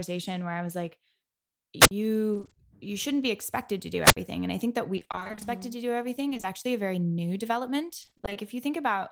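Speech with two kinds of trouble. There are two wireless microphone squelch dropouts, at 1.80 to 1.91 s and at 4.03 to 4.17 s, the second one between "be expected to do" and "and i think that". Each is a short burst of hiss, then a hole of near silence lasting 60 to 65 ms, then the voice coming back. That's the analogue FM link fading until the receiver's squelch shuts the output off for a moment. The other problem is repeated packet loss giving a robotic sound, in four stretches: 2.33 to 2.57 s (right before "you shouldn't be expected"), 4.95 to 5.43 s, 6.29 to 6.45 s (between "to do" and "a very new"), and 8.01 to 8.37 s. In each one, holes of about 20 ms keep arriving, and roughly half of every stretch is filler made by stretching the previous bit of sound. That's why those spots turn choppy with pieces missing.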